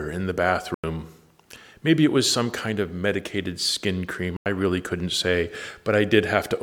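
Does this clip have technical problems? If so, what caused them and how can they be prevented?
Yes. The speech drops out twice into blocks of digital silence: from 0.74 to 0.84 s, right after "in the", and from 4.37 to 4.46 s, between "of medicated skin cream" and "really couldn't say". Each gap lasts about 93 ms, long enough to hear as a short hole rather than a tick. The sound cuts out and back with no fade. Two identical gap lengths fit a 4096-sample buffer at 44.1 kHz that was written out as zeros, which happens when the audio program misses its deadline to fill the buffer or when its processing produces invalid values. To prevent it, give the audio thread enough processing headroom and priority, or use a larger buffer, and check processing stages for invalid output.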